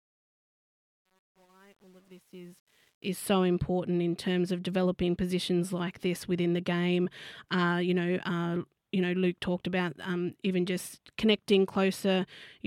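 From 0.0 to 3.33 s, the fade-in up to "important in terms of" carries truncation distortion on a fade. The quietest stretch, to about 2.8 s, turns gritty, which fits a 9-bit undithered gain stage. Unlike steady hiss, the grit shrinks as the level rises.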